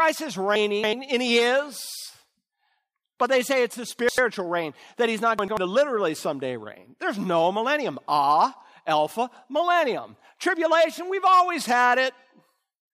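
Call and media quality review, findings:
Chunks out of order in the speech at 0.56–0.93 s, 3.90–4.18 s and 5.39–5.57 s. Jumbled moments at the hard joins. Audio blocks of about 93 ms play late by three, two and one blocks. Likely jitter-buffer or capture write-order fault.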